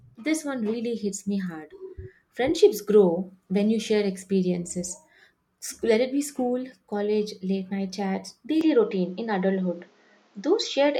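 Speech, with one fault. At 8.61 s the sound abruptly narrows, losing everything above 7.6 kHz, with faint new background noise and no gap. The input likely switched to a poorer device.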